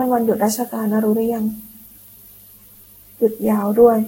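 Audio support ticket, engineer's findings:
Generation loss, whole clip of speech: swirly, hollow, smeared consonant attacks. Likely repeated lossy re-encoding, about ten passes, consistent with Vorbis near 60 kbit/s. Spectrogram: hard ceiling at 16.6 kHz, speckled holes and smeared onsets; waveform transients softened.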